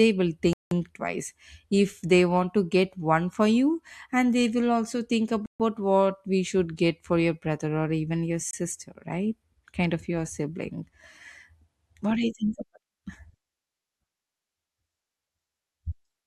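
At 0.53 s the speech drops to silence for about 0.18 s, again at 5.46 s for 0.14 s, and briefly at 8.51 s for 23 ms, resuming each time. These gaps are likely Bluetooth stalls, where delayed packets let the receiver's buffer run empty.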